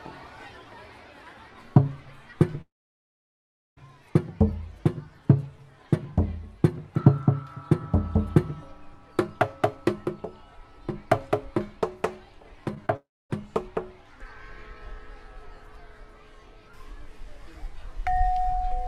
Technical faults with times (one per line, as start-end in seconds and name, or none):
2.61-3.78 long network dropout
12.74-12.90 short concealed packet loss
12.96-13.31 long network dropout